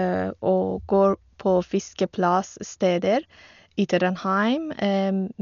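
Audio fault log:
Throughout: dull, muffled speech with nothing above 6.9 kHz and rough, fluttering noise around tones, likely from heavy Dolby Digital compression, which fits about 48 kbps.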